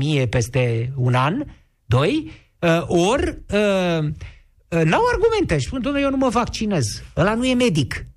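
Nothing in this speech recording stands out as a technical fault; the audio just carries on as it should, with nothing breaking in at any point.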